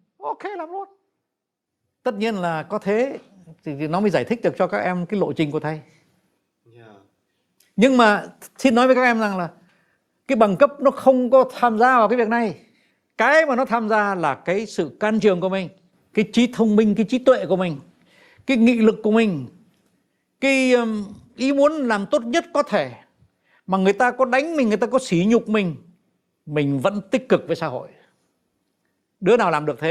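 From 0.18 s to 10.87 s the automatic gain is rising: the gain control judged the speech input too quiet and pushed its gain up by about 12 dB over roughly ten seconds, so the voice and the room noise beneath it swell together rather than the voice alone getting louder.

Overlapping from 8.65 s to 20.82 s comes automatic gain falling, as the control decides the level is now too high and pulls it back by about 4 dB. The speech starts loud and then sinks steadily, carrying its background down with it.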